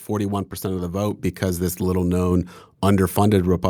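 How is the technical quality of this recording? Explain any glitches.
The recording has one level glitch. At 1.11 s, between "of the" and "because this little", the microphone volume stepped up: the call software raised the input gain by about 4 dB at once, so voice and background jump louder together.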